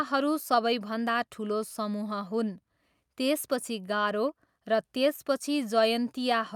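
No technical faults can be heard anywhere in the speech recording; the signal stays continuous and intact throughout.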